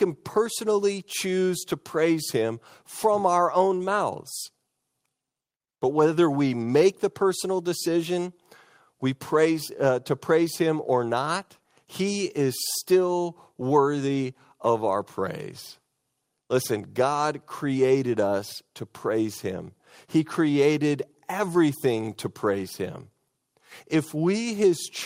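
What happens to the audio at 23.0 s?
Nothing goes wrong at 23.0 s; the speech continues intact through that moment, with no dropout, click or distortion to be heard.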